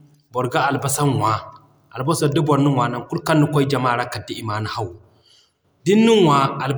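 No faults are audible anywhere in the speech recording.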